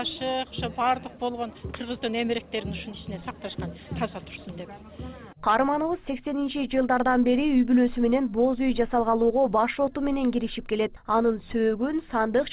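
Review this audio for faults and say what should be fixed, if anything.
No faults; nothing needs fixing.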